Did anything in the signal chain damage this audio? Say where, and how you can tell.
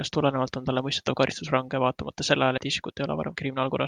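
Yes. At the codec decode stage, compressed frames were skipped: a few whole frames went missing or were rejected as damaged, so the speech jumps ahead by around 70 ms, which fits 20 ms frames. It happens at 1.29 to 1.34 s and again at 2.57 to 2.60 s. The sound lurches forward with a slice of speech gone.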